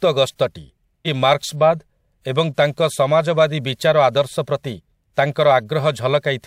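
Around 1.05 to 1.08 s, compressed frames were skipped: roughly half a second of speech vanishes, likely about ten 46.4 ms frames, so the audio jumps ahead at that point.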